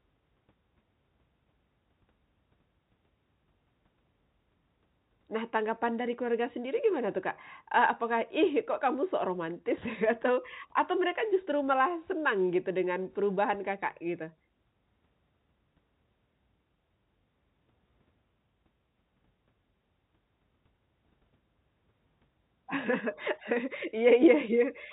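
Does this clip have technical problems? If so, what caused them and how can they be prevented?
No: the speech shows the expected G.711 telephone coding band limit, with nothing above 4 kHz, and there is no fault to trace or prevent.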